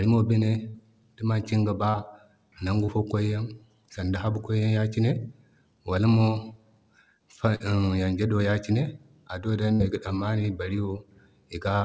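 Brief smears and wobbles at 0.70 to 0.76 s, 1.90 to 1.96 s, 2.86 to 2.90 s and 7.56 to 7.62 s are short concealed packet loss: around 40 ms of audio (20 ms at 2.86 s) arrived too late, and the receiver extended the preceding sound before blending back.

At 9.74 to 9.82 s a concealed gap marks a burst of packet loss. About 60 ms went missing in a row, and the concealment stretched and attenuated the last sound until the audio resumed further on, within a call band that stops at 8 kHz.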